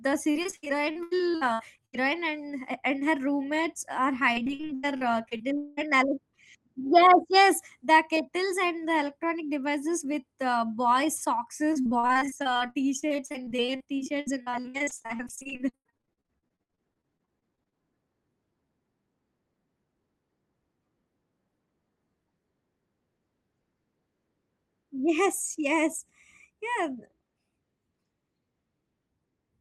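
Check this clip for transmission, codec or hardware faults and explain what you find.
Repeated packet loss (robotic sound) occurs in three stretches of this speech: 0.31 to 2.07 s, 4.33 to 5.81 s, and 11.73 to 17.74 s. Packets keep going missing, and each hole is bridged by extending the sound just before it, so about a third of each stretch is patched rather than real. Gaps run up to 80 ms, 196 ms and 98 ms respectively, giving choppy speech with chunks dropped, over an Opus call path band-limited near 12 kHz.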